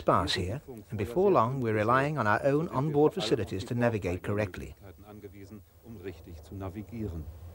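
At 1.62 s a bit error spike flips a few samples by a power of two, a sharp tick peaking at about -33 dBFS, a thin vertical line spanning every frequency.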